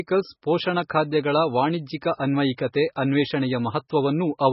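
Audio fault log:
Throughout, MP3 compression: the speech is heavily damaged, with nothing above 5.6 kHz, so it sounds dull, and there's a watery, swirly texture where weak frequency components keep dropping in and out from frame to frame. Sibilants come out as metallic chirps and attacks are smeared. That's likely a starved MP3 encoder cutting the treble and zeroing detail, which fits a very low bitrate around 16 kbps.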